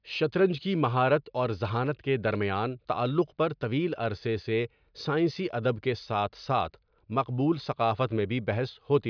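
No technical faults can be heard anywhere in the recording. The speech runs without any audible break or disturbance.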